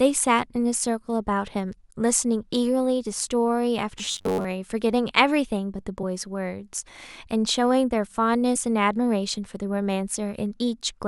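From 3.99 to 4.47 s, the speech takes on robotic sound from repeated short buffers. It turns into a rigid, metallic buzz near 93.8 Hz. That pitch comes from one buffer-length snippet looping over and over, about 10.7 ms each time. Most of this stretch is repeated material, not fresh audio. The likely cause is audio arriving too slowly, so playback loops the last snippet while the real sound is dropped.

At 6.02 s and again at 8.55 s, compressed frames are skipped. Each time, a single frame of 23.2 ms fails to play. That frame length fits a 1024-sample codec frame. The sound jumps ahead by roughly one frame's worth of time.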